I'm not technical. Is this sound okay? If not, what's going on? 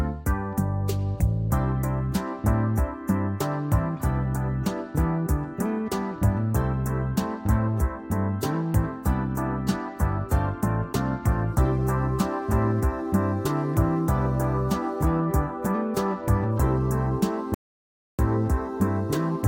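No. Near the end, at about 17.54 seconds, the sound suddenly cuts out and goes silent for roughly two-thirds of a second, coming back at 18.19 seconds. That gap is a playback stall. The player most likely ran short of audio data, or was briefly held up by something else on the device, so it had nothing to send out until it caught up again.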